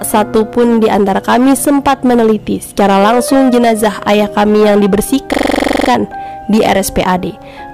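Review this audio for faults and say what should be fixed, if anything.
From 5.33 to 5.89 s, a system hang loop repeats one 42.67 ms slice at 23.4 Hz, a rapid stutter consistent with a stalled host replaying a 2048-sample ring buffer. To prevent it, fix the driver or system stall and have the audio path output silence rather than recycle stale buffer contents when it underruns.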